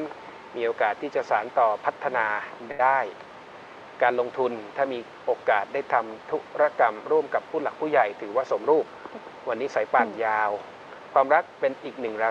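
At 2.71 to 2.81 s, a short stall from a late packet holds the sound for 77 ms, with nothing lost. The spectrogram shows a brief frozen, smeared band. From 8.48 to 9.20 s, a jitter buffer speed-up runs the audio at 111% with unchanged pitch. About a tenth of a second is trimmed, so the waveform loses whole cycles and sounds hurried.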